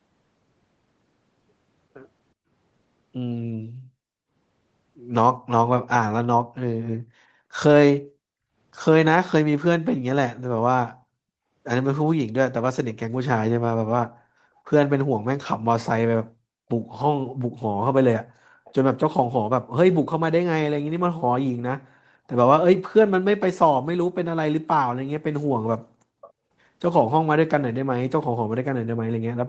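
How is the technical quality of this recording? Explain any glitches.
The recording has two short glitches, both from the call's echo handling, heard over audio that tops out around 8 kHz, as a call codec like Opus at about 24 kbps would leave it.

From 8.3 to 8.55 s the room sound suddenly sinks, falling by about 38 dB for roughly a fifth of a second before springing back. This is background gated by the echo canceller. While the far end's audio was coming out of the loudspeaker, the canceller clamped down on the microphone so hard that the ambient background vanished with it. The background returned once the canceller let go.

From 26.21 to 26.33 s a faint, brief ghost of earlier speech appears, arriving about 486 ms after the original and sitting roughly 25 dB below it, so it registers as a quiet scrap. The likely cause is echo leak. On a loudspeaker-playing side, the echo canceller failed to strip out all of what its microphone heard, and a fragment slipped through and was sent back down the call.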